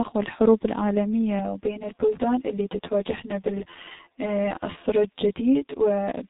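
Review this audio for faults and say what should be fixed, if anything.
The whole speech clip has gone through the G.723.1 codec: nothing above 3.8 kHz, with a muffled, hoarse quality and smeared consonants that fit a roughly 6 kbit/s voice coder. Record or route the call over a wideband codec, or capture the audio locally, so it never takes this low-bitrate path.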